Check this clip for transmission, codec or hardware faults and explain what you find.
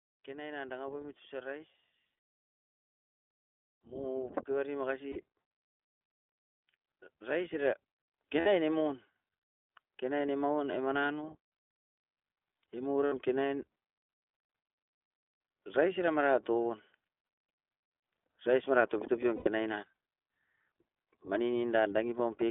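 The clip carries three faults: narrowband codec coloration throughout, two slow level swells, and five short dropouts filled with a held buzzy sound.

The iLBC codec is present from start to finish. The speech sounds thin and slightly rough, with a synthetic edge, and it is confined to roughly 250 Hz to 3.5 kHz. Each 20 ms frame's excitation is coded independently at a low rate, which fits iLBC's 15.2 kbps mode. That coding discards the upper band and the fine detail.

Automatic gain rising occurs from 0.25 to 1.77 s, by about 4 dB, and again from 3.81 to 5.3 s, by about 7 dB. Speech and background swell together over more than a second. An automatic gain control judged the input too quiet and raised its gain gradually.

Lost iLBC frames occur at 5.12–5.16 s (40 ms), 8.40–8.48 s (60 ms), 10.22 s (20 ms), 13.06–13.14 s (60 ms) and 19.36–19.48 s (100 ms). Each gap sounds like a held, buzzy vowel. 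The decoder repeats the last pitch cycle mixed with noise, and clean speech returns almost at once because each frame decodes on its own.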